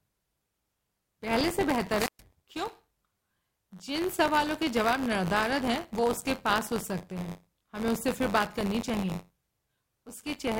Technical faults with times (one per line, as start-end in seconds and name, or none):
0.00-10.60 buffer tearing
1.97-2.21 wireless microphone squelch dropout